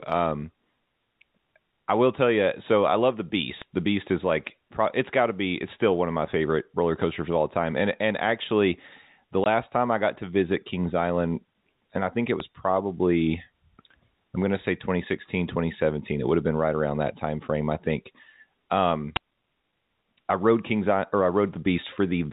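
At 3.62 s, just after "I love the", a sharp snap sits on top of the speech. It is an electrical switching spike, likely from a nearby switch arcing and coupling a brief burst into the audio line. It lasts about a millisecond and is unrelated to the speech underneath.

At 9.44 s, between "and actually the" and "time I got to", the audio drops out for 20 ms. This is packet loss filled with silence. The gap length fits a single lost 20 ms packet, and the receiver played silence instead of concealing it. The speech itself is heard through the 4 kHz telephone band of the G.711 coding.

Two more switching spikes follow. The first comes at 12.40 s, after "and I think it", as a single very short snap. The second comes at 19.16 s as a slightly longer crackle of about 8 ms. Both have the same likely cause as the first.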